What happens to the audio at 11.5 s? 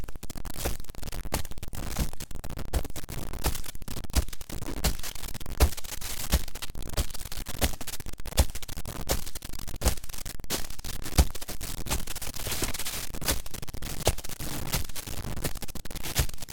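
At 11.5 s you're hearing the same harsh, buzzy grit that runs through the whole clip, and it's a stuck bit. One data bit is likely jammed at a fixed value, so about half the samples jump by a step of around -30 dBFS, which puts that raspy noise right into the quiet stretches too.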